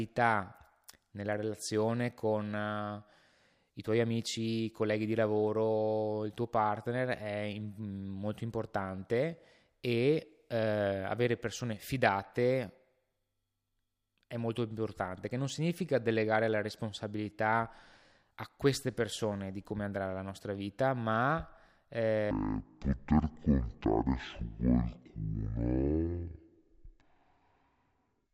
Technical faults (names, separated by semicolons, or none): stereo read as mono